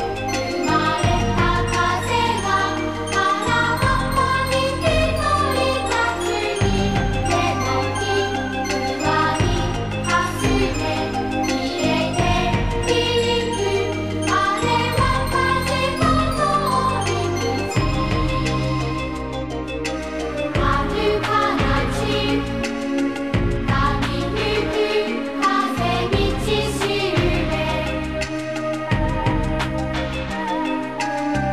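No dropouts, clicks, distortion or level jumps turn up anywhere in the recording.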